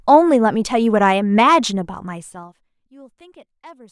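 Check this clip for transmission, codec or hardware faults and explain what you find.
One fault stands out in this speech clip: zipper noise during a level drop.

From 2.09 s to 2.69 s, the level falls by around 25 dB in 2 dB steps, about twenty a second, with no smoothing between them. Each abrupt jump puts a small discontinuity into the waveform, heard as a fast ticking that rides on the speech as it fades. The waveform envelope shows a staircase instead of a ramp, and a spectrogram shows faint, evenly spaced vertical broadband lines at each step.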